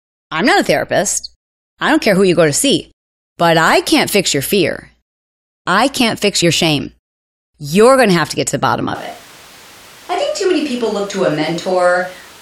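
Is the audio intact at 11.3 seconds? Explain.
No. From 8.95 s, just after "get to the bottom", to the end, this is a switch to a distant microphone, likely a fallback pickup. Sound turns suddenly hollow, thinner and about 5 dB quieter, with audible room noise; unlike a plain gain drop, tone and ambience change too.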